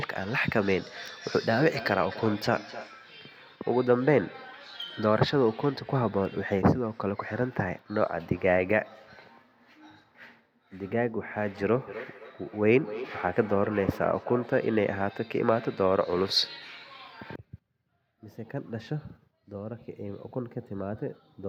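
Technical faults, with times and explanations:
1.12–2.95 s, feedback echo between two devices: the speech keeps coming back roughly every third of a second, peaking at about 14 dB below the direct voice. A second device in the room is playing the call aloud, its mic catches that, and neither echo canceller removes the other's output.
11.88–14.65 s, feedback echo between two devices: the same loop returns, a touch louder at about 13 dB down, with the same spacing of roughly a third of a second.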